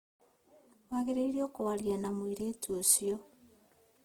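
From start to finish the speech carries Opus compression damage that is plainly audible: voiced sounds turn rough and grainy. The likely cause is Opus in its CELT music mode at a low rate, which fits about 16 kbps. It keeps each band's energy but fills starved bands with folded or synthetic noise. A spectrogram shows full bandwidth up to about 20.2 kHz, with few holes, but smeared, speckled upper bands in place of clean harmonics.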